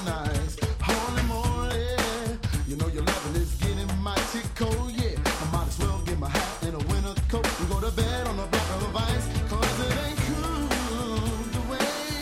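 No technical fault can be heard anywhere in this audio. There is nothing in the clip to time or trace back to a cause.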